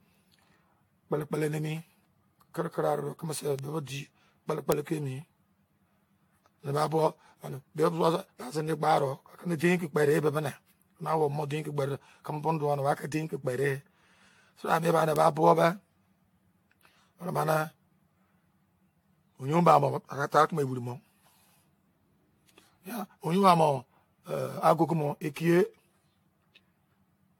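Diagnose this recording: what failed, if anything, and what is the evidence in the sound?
Throughout, the speech has a swirly, hollow, smeared quality, blurred consonant attacks, and nothing above 19.3 kHz. That is worse than a single AAC-LC pass at 96 kbit/s would give. The cause is likely generation loss at the codec stage, with about seven successive decode and re-encode passes, each quantising on a shifted frame grid so the noise and spectral holes build up.

There are sharp, broadband ticks at 3.59 s, 4.72 s and 15.16 s that bear no relation to the speech around them. These are bit error spikes from storage or a digital link, where a flipped bit throws a sample by a power of two and it snaps straight back. That hits three samples at 3.59 s and one at each of the others.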